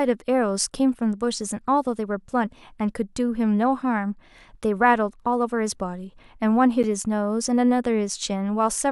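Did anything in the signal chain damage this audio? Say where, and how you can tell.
Yes. A gap between stream segments hits this speech at 6.83 s, where a hard-edged silence of about 9.5 ms cuts in. It comes from playback of segmented streaming: segment timestamps, on 4.0 s boundaries, leave a hole the player fills with silence. Unlike a dropout, no speech is lost; time is added.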